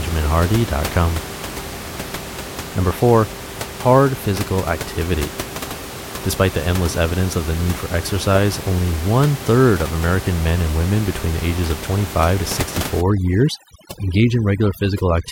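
Overdone noise removal runs from 13.01 s to the end at 15.32 s. The reduction is set so hard that frequency bands close to the estimated room noise, which sits about 12 dB below the speech, are pulled down or muted, leaving twinkling specks.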